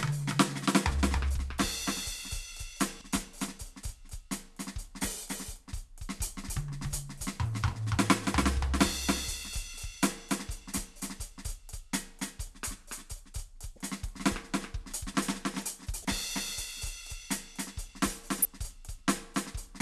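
The whole music track has a doubled audio track: a second copy runs about a third of a second behind, roughly 5 dB quieter, likely from an edit or capture path holding two copies. Damaged data in the compressed stream causes brief glitches of about 30 ms at 2.98, 13.74, 16.02 and 18.42 s, where the decoder loses sync.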